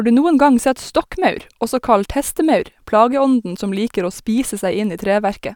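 No technical faults are audible.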